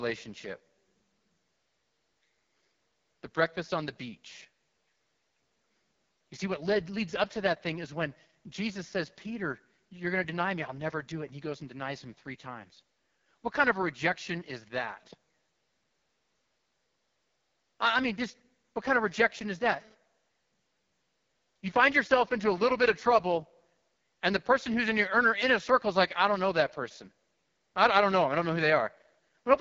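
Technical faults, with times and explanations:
Throughout: AMR wideband (HD Voice) codec. The speech has the rough, raspy, buzzy texture of AMR-WB at its lowest rate, which fits about 6.6 kbit/s. The codec rebuilds the voice from a pulse-driven vocal tract model below 6.4 kHz and fills the band up to about 7 kHz with shaped noise. Nothing reaches above about 7.5 kHz. With so few bits, the pulse excitation is coarse, so voiced sounds come out grainy and harsh.
19.02 to 19.94 s: GSM phone buzz. For just under a second, a hard, raspy buzz at about 217 Hz sits underneath the speech. It is rich in harmonics and has no relation to what is being said, at a level about 29 dB below the signal. A nearby 2G phone transmitting in 217-per-second bursts gets its radio pulses rectified by the audio circuitry. The buzz appears briefly and then stops, which points to a short data transfer rather than a call.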